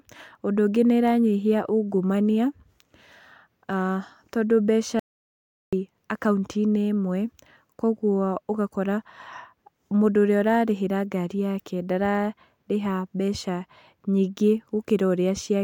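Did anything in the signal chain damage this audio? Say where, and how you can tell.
Yes. At 5.00 s the speech cuts out mid-flow into silence, with no room tone. It returns at 5.73 s, so about 0.73 s is lost. This is an audio dropout to silence. The likely cause is a lost input connection or link while the recorder kept writing silence.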